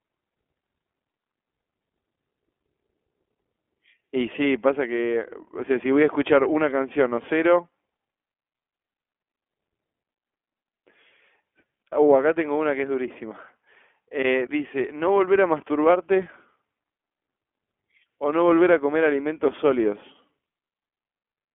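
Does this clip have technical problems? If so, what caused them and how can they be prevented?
Yes. The whole clip has gone through the iLBC codec, and the damage is plainly audible. Nothing survives above about 3.8 kHz, and the speech sits in a narrow 300 Hz to 3.4 kHz telephone band, so it sounds thin and boxy. Each short frame's excitation is coded on its own, which gives the voice that slightly rough, synthetic grain. The texture fits 20 ms frames at around 15.2 kbps. To avoid it, record or route the call through a wideband codec such as Opus instead of narrowband iLBC.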